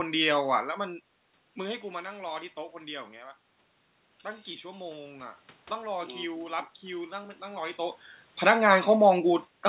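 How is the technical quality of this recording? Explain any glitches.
The recording has one clear glitch: automatic gain rising, with the level creeping up over several seconds. The audio is narrowband, with nothing above 4 kHz, which fits a G.711 mu-law call path.

From 4.62 s to 7.88 s, the input level falls by about 13 dB. The automatic gain control responds by slowly adding about 6 dB of gain. Speech and room noise swell together, so the background gets louder along with the voice.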